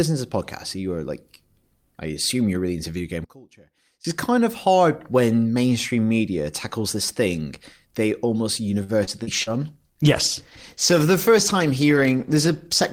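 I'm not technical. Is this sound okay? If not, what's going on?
No. From 3.24 to 4.05 s, after "really into video game", the voice nearly disappears, likely from one channel inverted, which cancels the voice when left and right combine.

From 8.83 to 9.50 s, after "this thing they almost", it turns choppy and robotic. That is repeated packet loss: pieces went missing and the gaps were patched by stretching the previous sound.

From 9.33 s to the end, the voice sounds rougher and more muffled because of a call bitrate drop. The connection weakened, so the call squeezed the audio into far less data.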